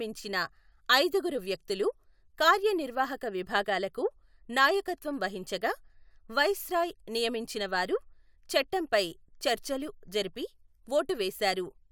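No technical faults can be heard anywhere in the speech recording, and the signal holds steady throughout.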